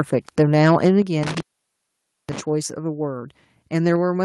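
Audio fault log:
0.38–1.00 s, microphone overload: the loudest syllables gain a harsh, crackling edge where the waveform tops are flattened, about 5 dB past full scale with around a twentieth of samples clipped. Input gain set too high is the likely cause. Unlike codec distortion, the grit follows the peaks rather than sitting on the whole sound.
1.02 s, microphone volume stepped down: voice and background fall together by about 7 dB in a single step, right after the distorted stretch. This is likely the call software cutting the input volume in response to clipping. Unlike a noise gate or fade, it happens once and the level stays lower.
1.23–2.41 s, intermittent contact: the sound drops out for about 0.89 s, with crackle where the signal breaks and returns, and faint hiss while the line is open. A loose plug or cable would cause this. Unlike a packet-loss dropout, the edges crackle rather than glitching cleanly.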